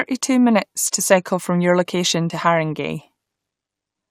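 At 2.29 s, right after "cycle from your location", damaged data in the compressed stream makes the decoder misread a frame and lose sync, producing a brief glitch of about 12 ms. A spectrogram shows a thin vertical disturbance, and the waveform a short disruption.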